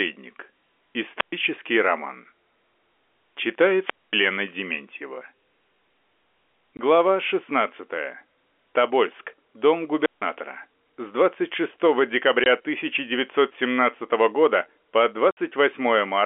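A rise of hiss at 1.15 s gives way to near silence of about 119 ms before the speech returns at 1.33 s. The same pattern recurs from 3.75 to 4.25 s with a 230 ms hole and from 9.98 to 10.25 s with a 160 ms hole. This is a wireless microphone squelch dropout: the analogue FM radio link faded, the noise climbed, and the receiver's squelch muted the output until the signal recovered.

Separately, abrupt gaps cut the speech from 6.77 to 6.79 s, from 12.44 to 12.46 s, and for 60 ms from 15.31 to 15.37 s, right after "года по". This is packet loss filled with silence. Lost audio was replaced by dead air, which gives the hard edges, and the 20 and 60 ms hole lengths fit 10 ms packets, two or six at a time. All of it sits in the narrow telephone band, roughly 250 Hz to 3.4 kHz.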